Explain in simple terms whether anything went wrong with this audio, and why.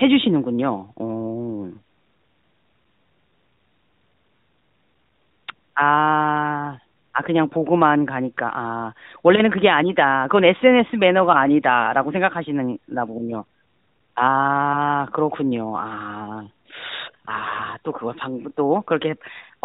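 Two short patches of AMR bit errors, at 5.38 to 5.48 s and at 17.46 to 17.61 s. The phone-style speech arrived with some bits flipped, so the voice turns briefly scratchy and gargly. The second patch sounds rougher, with a heavier error rate.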